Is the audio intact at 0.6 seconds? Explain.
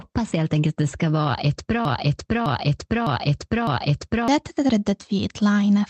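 Yes, at 0.6 s the speech is intact, with nothing dropped, clipped or distorted, only the normal coding character of the call path, whose band limit at about 8 kHz fits a wideband Opus setting.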